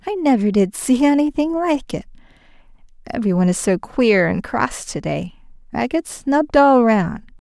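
No technical faults are audible.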